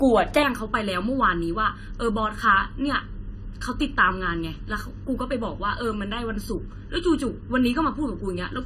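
From the start, the speech is dull and smeared, with a warbling, fizzy edge on sibilants. Nothing is heard above 14.2 kHz. This is AAC compression, likely AAC-LC at a low rate near 32 kbps. The encoder drops fine spectral detail and trims the top band.

From 0.43 s to the end, a channel delay causes comb filtering. One channel arrives late by under a millisecond, and the mono sum cancels shared content at evenly spaced frequencies. The first notch falls near 700 Hz. The speech turns hollow and phasey.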